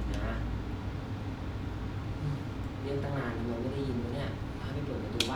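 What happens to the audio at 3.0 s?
Nothing goes wrong at 3.0 s; the speech carries on intact through that moment, with no dropout, click, glitch or other audible fault.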